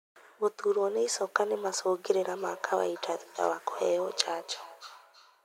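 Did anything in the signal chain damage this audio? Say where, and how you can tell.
Yes: feedback echo between two devices, from 2.31 s to the end of the clip, at the call-processing stage. The speech returns at a steady interval of roughly a third of a second, peaking about 17 dB below the direct speech. That fixed spacing fits a second device in the same room on the call: its loudspeaker replays this microphone's audio, which gets picked up again, and neither device's echo canceller removes sound played by the other.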